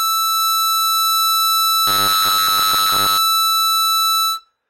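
Music, with robotic sound from repeated short buffers between 1.88 and 3.18 s: a metallic buzz at 100 Hz, which fits a 10 ms chunk likely being replayed for most of that span. Unlike a stutter, the repeats fuse into a steady pitch instead of audible jumps.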